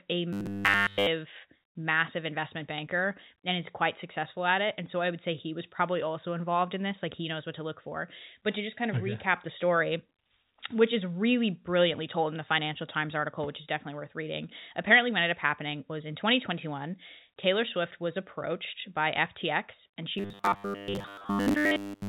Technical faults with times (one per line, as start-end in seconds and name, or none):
0.33-1.07 robotic sound from repeated short buffers
20.18-22.08 robotic sound from repeated short buffers